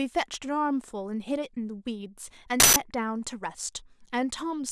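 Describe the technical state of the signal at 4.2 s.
The signal at 4.2 s is intact, with no audible technical fault at that point in the speech.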